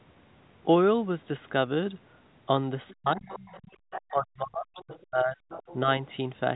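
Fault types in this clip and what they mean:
Other side's voice leaking through: the echo canceller likely left part of the far end's loudspeaker playback in the microphone signal, so a fainter second voice slips in, in short scraps near 2.9 and 5.5 s and a longer stretch from 3.26 to 4.1 s.
Speech suppressed in double talk: while both sides spoke at once, the echo canceller likely could not separate its talker from the echo and turned both down, so the speech sinks by up to about 40 dB from 2.92 to 3.54 s and 4.11 to 5.37 s.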